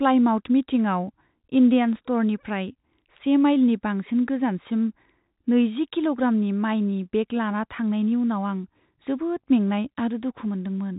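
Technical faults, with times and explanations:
No technical faults are heard in this speech, so there are no times or explanations to give.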